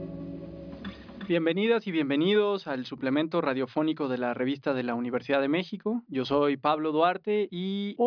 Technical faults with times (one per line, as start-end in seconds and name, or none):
none